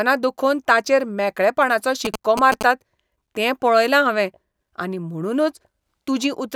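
From 2.05 to 2.63 s, just after "ताचेर मेकळेपणाचो", GSM signalling bursts break in: a nearby 2G phone's rectified radio pulses give a galloping dit-dit-dit of short 217 Hz buzzes, only slightly below the speech.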